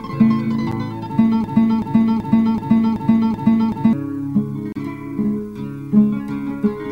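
Gaps at joins of encoded pieces break the sound at 0.72 s, a 9.1 ms dropout, and again from 4.72 to 4.76 s, a 32 ms silence. The spacing of exactly 4.0 s suggests the audio was encoded as separate pieces about that long and joined untrimmed, leaving each encoder's start-up delay and last-frame padding in place. The sound drops away with smeared edges, then resumes exactly where it left off. A broken-record loop runs from 1.44 to 3.93 s, where a 380 ms fragment repeats back to back seven times. The repeats are exact copies, so the sound stutters in place instead of moving forward, and whatever should have played across those two and a half seconds never arrives. The likely cause is a stall in the player, encoder or stream that kept resending the last fragment it held.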